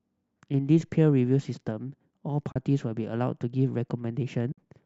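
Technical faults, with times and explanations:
2.52 s and 4.52 s: AAC frame loss with muting. Two brief holes open in the speech, about 40 ms and then 60 ms long. The decoder silenced the missing frames. Overlapping windows fade out and back in, so the edges are soft.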